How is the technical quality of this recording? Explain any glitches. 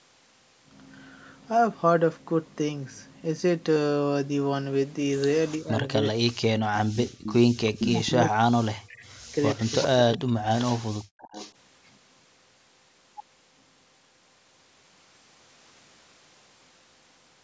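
The recording has two related call-path faults: echo leaking back from a loudspeaker, and the talker being suppressed during double talk.

Echo leak, at 5.50–5.56 s, 6.95–7.90 s, 8.89–10.64 s and 11.19–11.52 s. The likely cause is a far end playing the call on a loudspeaker whose echo canceller failed to remove what its microphone picked up, so that sound returned down the line. You hear a copy of the speech delayed by 398 ms. It is faint at first, about 25 dB below the speech, and louder later, around 10 to 20 dB below.

Speech suppressed in double talk, at 5.58–6.95 s and 7.74–11.22 s. Both ends were active together, and the echo canceller likely could not tell its own talker from the loudspeaker echo, so it turned everything down. The main speech dips or cuts out in pieces, by as much as roughly 40 dB. This totals about a second in the first stretch and about two seconds in the second, with nothing audible above 8 kHz from the call's band limit.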